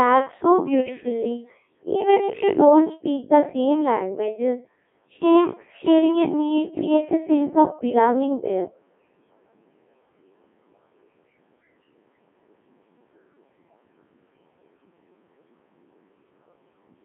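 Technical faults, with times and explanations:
Throughout, Codec 2 vocoder: the speech comes out robotic and buzzy, squeezed into a 200 Hz to 3.4 kHz line band and heavily mangled, because the decoder rebuilds it from sine waves using only pitch, voicing, energy and envelope, which fits a rate around 1.6 kbit/s.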